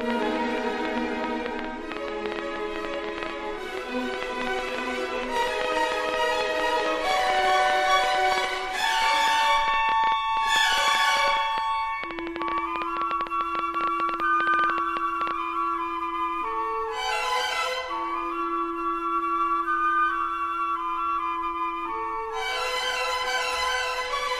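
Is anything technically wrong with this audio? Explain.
Yes. From 0.01 s to 15.3 s there's a train of clicks, about 8.2 per second at an uneven pace, around 150 in all, peaking well above the sound. Likely interference from nearby equipment or a faulty connection or power supply injecting pulses, heard as irregular ticking, even in pauses.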